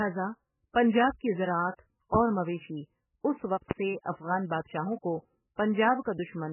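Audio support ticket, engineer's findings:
MP3 compression, throughout the speech. Heavy codec damage: watery, swirling texture as weak frequency lines drop in and out between frames, and nothing above 3 kHz. Likely an MP3 encode starved of bits, which fits a bitrate around 8 kbps.

Loud pop, 2.15–2.18 s, after "پنجاب کی زراعت", and 3.71–3.75 s, after "اور مویشی اس وقت". Single sharp pop each time, about 20 dB above the speech, which continues underneath. Likely a voltage step or pulse from a plug, switch, static or driver glitch.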